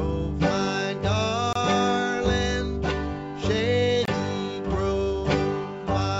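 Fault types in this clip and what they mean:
Gap between chunks: the audio arrived in pieces 2.5 s long, and each join leaves a short stretch of inserted silence rather than dropping any material. The sound stops dead and restarts for about 25 ms at 1.53–1.55 s and again at 4.05–4.08 s. On the waveform these show as flat silent slots with vertical edges. On the spectrogram they are thin empty vertical stripes cutting through everything below the 8 kHz ceiling of the G.722 call path.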